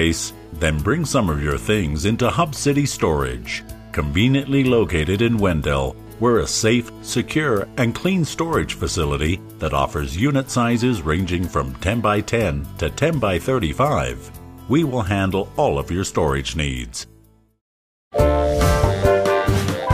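No technical faults can be heard anywhere in the clip.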